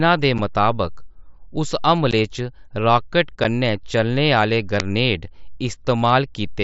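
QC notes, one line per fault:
0.38 s, 2.11 s and 3.44 s: unconcealed Bluetooth headset packet loss. The speech drops out in three brief holes. The first and third last about 7.5 ms, which fits a single lost packet. The one at 2.11 s lasts about 15 ms, which points to two packets in a row. Nothing fills the gaps, so each hole has hard edges that can click. The voice returns abruptly, carried over the mSBC link, whose light graininess is still audible.
4.80 s: uninitialised buffer. A single very short loud crack cuts in, lasting about 1.33 ms, which fits a 64-sample block. The player sent that block out before any audio had been written into it. Whatever leftover values sat in memory were played as samples. The result is a sharp, harsh tick, unrelated to the surrounding speech.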